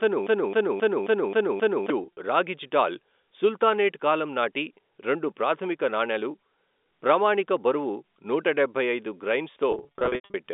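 From the very start until 1.9 s, a playback or streaming stage most likely stalled and kept resending the last fragment it held. The result is a broken-record loop: a piece about 0.27 s long repeats exactly, back to back, six times, already under way when the clip begins. Whatever should have played during those seconds is gone, replaced by the same stuttering slice.

Two stretches of packet loss with pitch repetition follow, where the receiver bridged missing audio by repeating the last pitch period and fading it. The first, at 2.03 to 2.17 s, loses 80 ms scattered over 140 ms, in gaps of up to 40 ms, which fits small 10 ms packets. These sound like brief, slightly held buzzy catches. The second, from 9.72 to 10.34 s, is heavier: 400 ms lost across 620 ms, with gaps up to 90 ms. The longest gaps outlast the roughly 50 ms fade and drop briefly into silence before the speech returns with a short cross-fade. 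Throughout, the narrow G.711 A-law telephone band of about 250 Hz to 3.6 kHz is audible.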